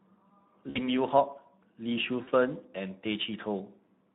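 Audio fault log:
Throughout, Speex codec: the speech sounds plainly coded, with a hoarse, noisy grain over the voice. At a rate near 11 kbps this CELP coder has few bits left for the excitation signal, so the fine structure between pitch pulses is replaced by coarse, noise-like approximation. The result is speech that loses its natural texture and clarity.
0.69 to 0.88 s and 2.23 to 2.32 s, VoIP packet loss concealed by the speech codec: two gaps where the voice is stretched out by the decoder and fades. The first lasts about 60 ms of lost audio, the second about 40 ms, which fits three and two lost 20 ms frames. The decoder repeats its last pitch and spectral shape while lowering the gain, and because each frame depends on the previous one, the voice stays thin briefly after the gap.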